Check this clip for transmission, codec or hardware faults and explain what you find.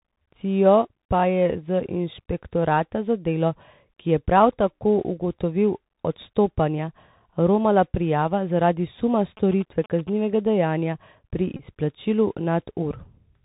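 Three faults are audible: Bluetooth CVSD codec damage across the whole speech clip, a patch of GSM signalling bursts, and a short Bluetooth headset packet repeat.

The Bluetooth CVSD headset codec colours everything. The encoder sends a single up-or-down bit per sample with an adapting step, which fits a 64 kbps CVSD link. Nothing survives above 4 kHz, so sibilants come out scratchy, loud bright syllables overshoot the step and distort, and a grainy hiss sits under the speech. On a spectrogram the energy stops flat at 4 kHz. The waveform looks staircased on fast transients.

GSM signalling bursts run from 9.37 to 10.10 s, after "romala prijava zaradi suma" and before "dejanja pri izplačilu". A nearby 2G phone was signalling, and the audio circuitry rectified its radio bursts into a galloping dit-dit-dit of short 217 Hz buzzes, sitting roughly 20 dB below the speech. A spectrogram shows a comb of harmonics on a 217 Hz spacing with regular vertical striations. 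The waveform carries evenly spaced spiky pulses.

A Bluetooth headset packet repeat occurs from 11.57 to 11.63 s, just after "dejanja pri". Voice packets between headset and phone went missing, and the chip decoded the last good packet's bits again for about 26 ms, which points to roughly seven lost 3.75 ms packets. It sounds like a brief buzz near 267 Hz. On a spectrogram it shows as a short band of harmonics spaced 267 Hz apart. The waveform shows one identical short segment repeating.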